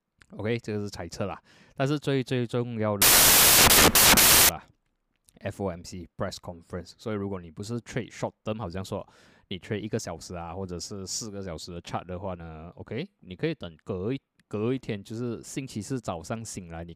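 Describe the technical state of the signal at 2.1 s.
At 2.1 s the speech signal is intact, with no audible technical fault at that moment.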